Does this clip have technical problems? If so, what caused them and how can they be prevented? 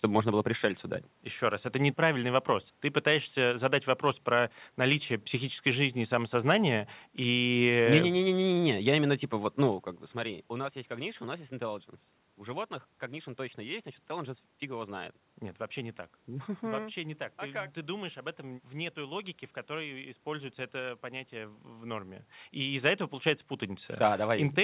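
No, nothing here is a technical problem: the room's background noise and the level shifts around 9.5 and 22 s, where the talker seems to move relative to the microphone, are just part of the recording, and the lack of anything above 4 kHz is simply how a 64 kbps G.711 mu-law call path sounds, so there's nothing to prevent.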